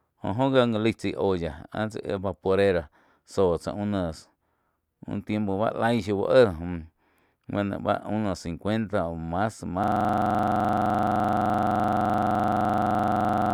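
At 9.84 s the speech locks into a system hang loop that runs to the end of the clip: the computer or its audio driver stopped supplying new data, and the playback hardware kept replaying the same 42.67 ms stretch, which fits a 2048-sample buffer, dozens of times over. The result is a rigid, rattling buzz at about 23.4 Hz. Unlike packet-loss concealment, which smears and fades, every cycle here repeats exactly and never decays.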